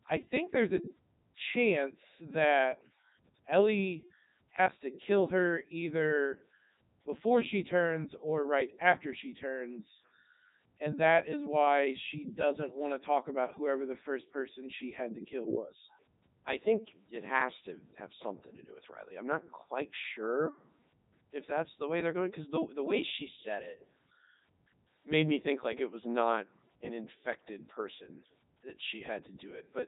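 A speech recording that sounds robotic and buzzy from start to finish, with no sound above about 3.8 kHz. This is the Codec 2 vocoder at work, heavy throughout. Rather than keeping the waveform, the codec transmits only pitch, voicing, energy and a rough spectral shape, and the decoder rebuilds the voice from sine waves. The result fits its highest 3.2 kbit/s mode.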